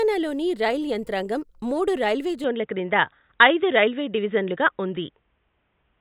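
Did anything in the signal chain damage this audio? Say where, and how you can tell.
Yes. An input switched to a poorer device at 2.44 s, right after "రైల్ యంత్రాంగం మూడు రైల్వే", and the speech stays on it to the end. The cut happens without any gap. Nothing remains above 3.8 kHz, so the speech turns dull and boxy, the level shifts by around 5 dB, and a faint new noise floor, roughly 50 dB down, appears. That points to the driver or device-routing stage, likely a change to a band-limited microphone or headset call profile.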